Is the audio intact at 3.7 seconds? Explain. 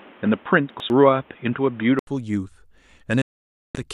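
No. At 3.7 seconds the speech sits inside a digital broadcast dropout that runs from 3.22 to 3.75 s. The receiver stopped getting decodable frames and muted its output. The sound fades out over about 3 ms, so it reads as an abrupt cut rather than a click. About 0.53 s of programme is simply gone. When valid frames resume, the speech returns mid-stream, and nothing sent during the gap is ever heard.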